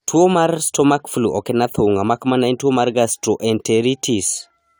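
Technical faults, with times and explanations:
No technical faults detected in the speech recording.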